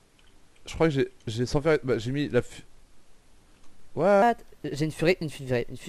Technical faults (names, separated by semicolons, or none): section at the wrong speed